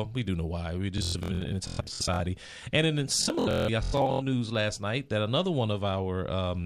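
Bluetooth stutter hits from 0.98 to 2.2 s and 3.23 to 4.22 s, just before "news last night that": lost packets make the receiver repeat short slices, producing machine-gun buzzes.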